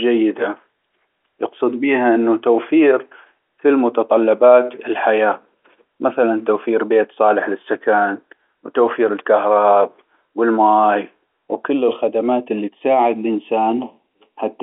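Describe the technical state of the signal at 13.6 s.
At 13.6 s the signal is affected by channel delay (comb filtering), which runs from 11.70 s to the end of the clip at 14.62 s. One channel lags the other by roughly a third of a millisecond, and when the two are summed to mono their shared content cancels at regularly spaced frequencies. The first notch falls around 1.5 kHz, inside the telephone band, so the speech sounds hollow and phasey there.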